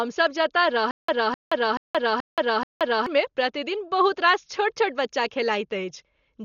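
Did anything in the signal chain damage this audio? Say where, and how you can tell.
Yes. Dolby Digital compression runs throughout the clip at the codec stage. The speech is dull, with nothing above 7 kHz, and a rough, fluttering noise sits around voiced tones. This is likely an AC-3 style encoder at a very low rate, consistent with about 40 kbps. Starved of bits, the encoder narrowed the band and left many frequency lines without mantissas. The decoder then filled those lines with dither noise, causing heavy codec damage.

A stutter with silent gaps occurs from 0.91 to 3.06 s, at the playback or stream-buffer stage. A 256 ms fragment repeats five times, each followed by about 175 ms of digital silence, so bursts return every 431 ms at an even pace. This points to a stalled player that kept retrying, replaying its last fragment, then running empty. The audio meant for that stretch is missing.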